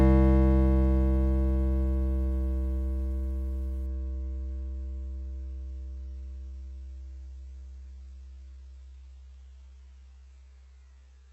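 At 3.86 s the adaptive stream switches to a lower bitrate, consistent with a slowed connection forcing a drop from full-rate AAC to a very thin HE-AAC stream. Without any gap, the music loses everything above 8 kHz, turning dull and artefact-laden through to the end.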